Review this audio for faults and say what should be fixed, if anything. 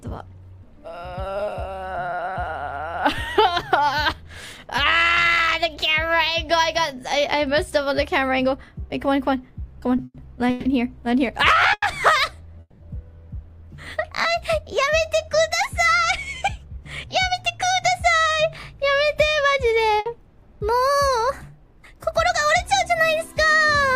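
Repeated stalls (stutter) run from 9.97 to 12.83 s. Packets kept arriving late, so the jitter buffer ran dry five times and the receiver stretched the last sound to cover 550 ms in total, the longest gap 200 ms. Nothing is lost, but the audio drags.

Jitter buffer speed-up hits twice: 16.03 to 17.50 s at 108% speed, trimming roughly 150 ms, and 21.72 s to the end at 104%, trimming about 100 ms. The buffer had over-filled, so the receiver snipped out pitch-period-sized slices. The pitch holds, but the first one feels hurried.

A burst of packet loss sits at 20.00 to 20.09 s. Those packets never made it in time, so the receiver carried the last sound forward and faded it. It then resumes further on, with about 60 ms of audio gone.

Fixing the network jitter and loss upstream, with a slightly deeper or more adaptive jitter buffer plus forward error correction, would prevent all three.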